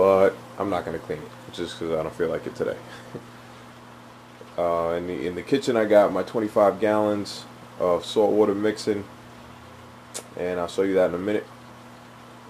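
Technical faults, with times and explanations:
Throughout, sample clock jitter: a few microseconds of timing wobble adds hiss about 35 dB down, swelling on loud, bright sound, gone in silence.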